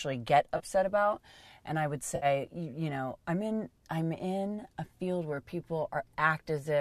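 At 0.57 to 0.61 s, just before "about and I would", there is AAC frame loss with concealment. A stretch of about 30 ms, consistent with three lost frames of what is likely a low-delay AAC stream, gives way to a brief smeared, noisy patch. A second, longer gap of about 60 ms comes at 2.16 to 2.26 s, after "about and I would" and before "you you know I'm". Here the decoder rebuilds the missing audio from the last good spectrum with randomised phase, so the sound turns phasey rather than clicking or dropping to dead silence.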